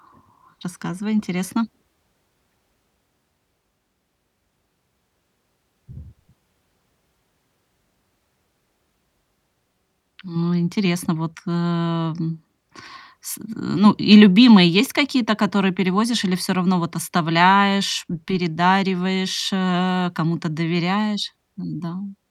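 No technical faults can be heard anywhere in this speech recording.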